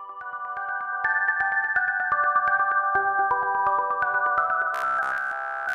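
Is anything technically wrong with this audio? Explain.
Yes. From 4.75 s to 5.73 s there is robotic sound from repeated short buffers. The likely cause is fresh audio reaching the playback stage too slowly, so the software keeps replaying the most recent fragment while the real material is skipped. Across essentially the whole stretch, the repeating loop imposes a steady buzz at 66.7 Hz, which fits a buffer about 15 ms long. The sound turns hard and metallic.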